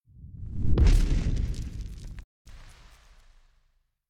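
At 2.22 s a digital broadcast dropout occurs. Lost frames made the receiver mute. The sound fades out within 20 ms and returns at 2.50 s.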